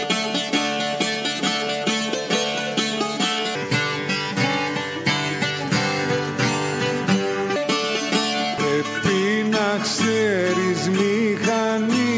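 From 3.55 s to 7.56 s a wrong sample rate fault makes the sound run at two-thirds speed and drop about 7 semitones in pitch, sluggish and heavy. The ratio fits material captured at 24 kHz but played back at 16 kHz without conversion, so speed and pitch fall together. On a spectrogram the whole spectrum in that span shifts down to two-thirds of its usual frequencies and every event stretches wider. On the waveform, cycles and envelopes look drawn out.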